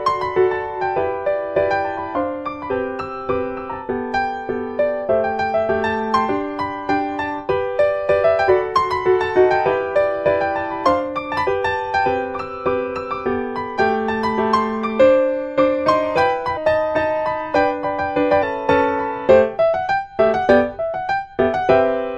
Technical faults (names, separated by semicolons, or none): damaged data in a compressed stream